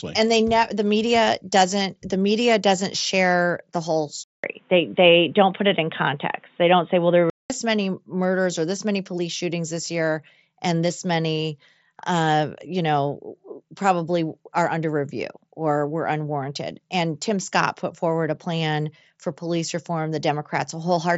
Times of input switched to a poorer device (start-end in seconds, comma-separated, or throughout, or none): 4.24-7.50